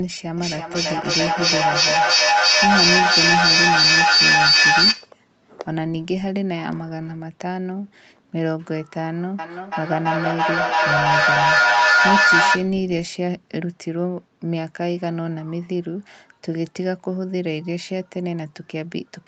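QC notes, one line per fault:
0.37–5.17 s and 9.39–12.8 s, feedback echo between two devices: each phrase returns about every third of a second, thinner and more ringing with each pass, and the repeats build up to about 8 dB above the speech instead of fading. Two devices in the same room are on the call. One plays back what the other's microphone captured, and that microphone hears it again. Each echo canceller removes only its own device's playback, so the loop keeps feeding itself.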